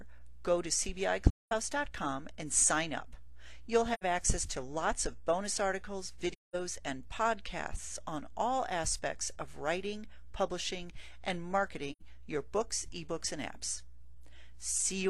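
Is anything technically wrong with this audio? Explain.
Yes. There is AAC frame loss with muting at 1.30–1.52 s, 3.93–4.04 s, 6.32–6.56 s and 11.92–12.02 s. Lost frames were decoded as silence, and overlapping windows fade the gaps softly. The gaps are about 0.21 s or 0.09 s long, which fits five or two lost frames.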